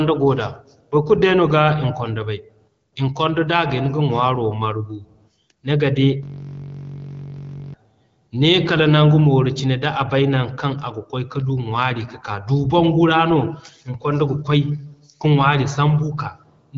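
From 6.23 to 7.74 s a system hang loop takes over the speech: the machine froze while the audio hardware kept replaying one 21.3 ms slice, which fits a 1024-sample buffer. The exact repetition at 46.9 Hz makes a steady buzz rather than the ragged stutter of a dropout.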